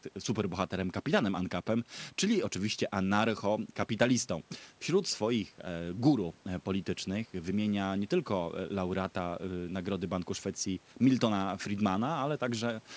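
Nothing stood out on listening to this speech, which comes through the call's microphone processing and G.722 wideband coding as expected.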